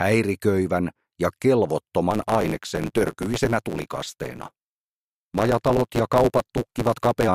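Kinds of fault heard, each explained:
Block size mismatch (truncated): Each block is written longer than the next stage reads, so its end is dropped. From 2.10 to 7.28 s this gives a 109 Hz buzz. The sound runs 1.16 times fast with its timbre kept, which fits 512-sample written blocks.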